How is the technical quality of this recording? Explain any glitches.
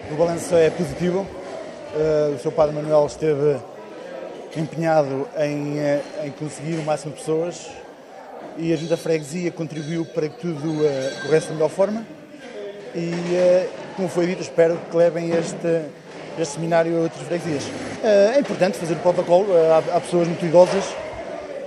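The technical quality of this recording is sound, with no glitches to explain.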